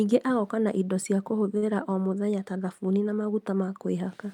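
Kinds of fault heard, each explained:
Short stall from a late packet: a packet arrived after its playout time, so the jitter buffer emptied and the receiver held the last sound going until it turned up, here around 1.57 to 1.64 s, between "agoka na indo cia" and "o mũthenya ta thabuni". About 48 ms of stretched sound fills the gap, nothing is lost, and playback resumes at the same point, so everything after it runs 48 ms later.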